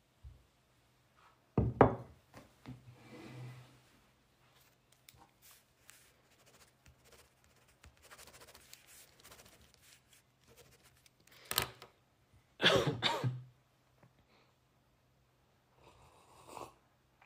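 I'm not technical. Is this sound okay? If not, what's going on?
Yes, it's fine; nothing here sounds wrong.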